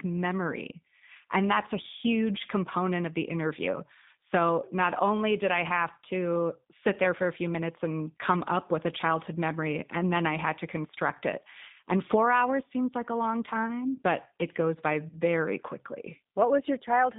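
Throughout, the G.729 codec rebuilds speech from a filter and sparse pulses, leaving plainly rough, synthetic audio, with the spectrogram empty above 3.7 kHz and below 150 Hz.

From 15.09 to 15.18 s, just after "it goes by", VoIP packet loss concealed by the speech codec stretches the last sound into a fading buzzy tone or coloured noise. About 40 ms went missing, which fits two lost packets. On the waveform it shows as repeated, shrinking cycles.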